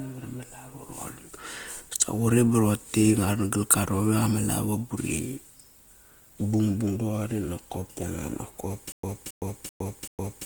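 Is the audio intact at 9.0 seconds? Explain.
No, at 9.0 seconds you're inside a stutter with silent gaps that starts at about 8.92 s and runs to the end. The same 0.27 s burst of speech repeats four times, with roughly 0.11 s of dead digital silence between repeats, on a steady 0.38 s cycle. That's likely a stalled player or stream replaying its last fragment on each retry, so the audio that belonged there is gone.

On top of that, the Opus compression running through the whole clip is plainly audible at that point too. The speech has a rough, grainy texture, which fits a low bitrate of around 24 kbps in music (CELT) mode. The band still reaches about 20.1 kHz, so it's likely the encoder filling starved bands rather than narrowing the bandwidth.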